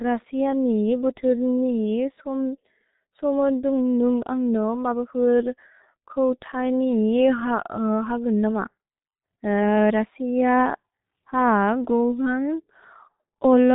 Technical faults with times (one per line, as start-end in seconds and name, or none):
0.00-13.74 G.723.1 codec